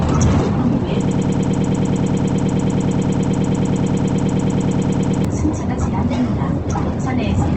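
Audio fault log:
throughout: Opus compression. The audio sounds grainy and rough, with noisy, gritty texture where tones should be clean, and nothing above 8.2 kHz. This is likely low-rate Opus in its CELT music mode, which fits a bitrate around 16 kbps, filling starved bands with folded or noise content.
1.08 to 5.25 s: broken-record loop. A fragment of about 106 ms repeats exactly, back to back, dozens of times for over four seconds, producing a rapid stutter. The likely cause is a stalled player, encoder or stream resending its last buffered piece, so the audio from that span is lost.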